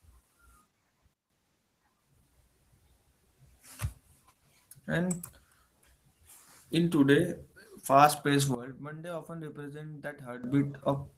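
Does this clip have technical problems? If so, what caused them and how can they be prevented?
Yes. Opus voice compression is plainly audible for the whole clip. The speech sounds hoarse and slightly robotic because the low-band excitation is coded coarsely. The band stays wide. This fits Opus in hybrid mode, with a linear-prediction layer below 8 kHz and a transform layer above it, running at a low bitrate of about 16 kbps in 20 ms frames. To prevent it, give the encoder a higher bitrate, or narrow the bandwidth so the available bits go to the speech band.

There are two sudden gain jumps. From 1.14 to 1.30 s the level drops abruptly by about 13 dB, and from 8.55 to 10.44 s it drops by about 15 dB. Each time it snaps back at the end. Speech and background noise fall and recover together, with no fade in or out. That points to a digital gain step, likely a level setting or bit shift applied instantly from one sample to the next. 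To prevent it, apply every gain change through a short ramp rather than as a single-sample step.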